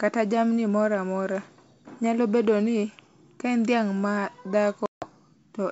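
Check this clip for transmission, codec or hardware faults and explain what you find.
One transmission fault is present, on a call carried by G.722 wideband coding at 64 kbit/s. Packet loss on an ADPCM call runs from 4.86 to 5.09 s. About 160 ms of audio goes missing, which points to roughly seven lost packets, and silence fills the gap. Without those packets, the decoder's adaptive predictor and step size drift away from the sender's. After the hard-edged hole, the speech comes back slightly distorted, then settles within tens of milliseconds.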